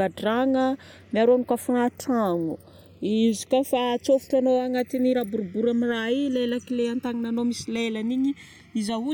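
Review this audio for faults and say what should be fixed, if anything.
Channels drifting apart throughout: clocks roughly 100 ppm apart let the delay slide to about 1 ms, so mono comb notches sweep as slow flanging, not a fixed offset's static coloration. Lock both recording devices to a shared word clock, or record both channels on a single interface.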